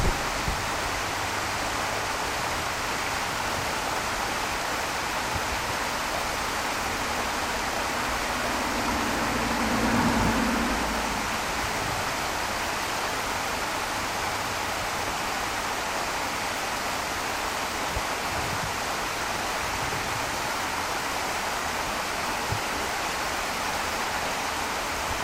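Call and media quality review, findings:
DAB burbling at 2.99–3.64 s, 12.64–13.63 s and 23.66–24.65 s: short noise blips in single sub-bands over the sound. Weak DAB reception, residual bit errors of under one percent reaching MP2 data. Spectrogram shows isolated sub-band blocks flaring for single frames.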